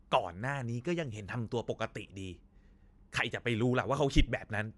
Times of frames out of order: none

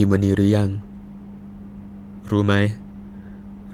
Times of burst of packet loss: none

